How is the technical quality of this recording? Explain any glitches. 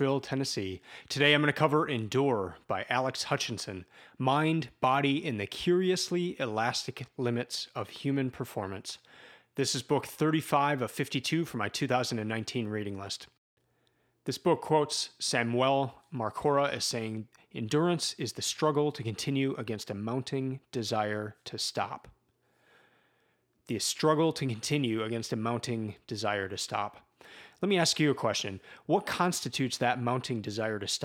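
Nothing needs explaining here, as there isn't a single glitch to be heard anywhere in this speech recording.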